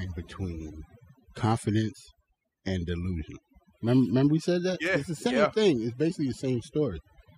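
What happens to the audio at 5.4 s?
At 5.4 s the speech carries overdone noise removal, which runs through the whole clip. A noise reducer set too hard is pulling individual frequency bands down or out whenever they sit close to its noise estimate. The background drops, speckled with twinkling, warbling specks. Quieter parts of the voice get caught too and vanish with the noise.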